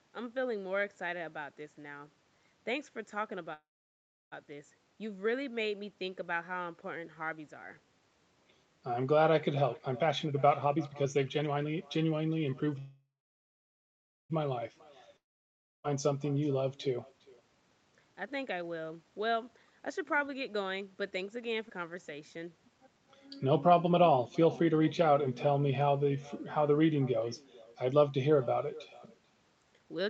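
Throughout this speech, every phrase is shadowed by an echo with no canceller: a thinner copy about 23 dB down, arriving roughly 0.4 s later. It is a constant trailing repeat, not the one-off breaks described below.

From 3.53 to 4.34 s comes a call audio freeze, likely from packets held up in the network until the jitter buffer ran dry. The last sound stretches into a fading buzz, then about 0.67 s of silence, and the speech resumes with nothing missing. The timing is simply pushed back by 0.78 s.

Between 9.61 and 12.75 s a jitter buffer speed-up trims short pitch-period slices to shed a backlog of around 0.7 s. The speech runs at 125% with unchanged pitch, so it sounds hurried rather than chipmunk-like.

A second freeze follows from 12.79 to 14.32 s, again with nothing lost. This one holds 1.5 s, about 1.18 s of it silent.

From 15.17 to 15.86 s a long network dropout gives the same fading buzz into about 0.63 s of silence. 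Unlike the freezes, the speech returns further on, with about 0.68 s never heard.

From 16.98 to 25.01 s a milder speed-up at 109% drops around 0.7 s. Inside it, at 21.69 to 21.71 s, a skip ahead jumps forward with almost no gap, splicing across roughly 0.3 s of missing audio instead of pausing.

From 29.80 s to the end a short speed-up runs at 140%. Throughout, nothing above 8 kHz is heard.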